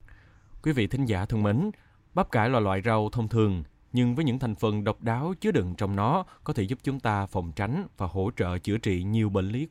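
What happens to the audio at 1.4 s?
Nothing goes wrong at 1.4 s: the speech continues cleanly through that moment, with no dropout, click, glitch or other audible fault.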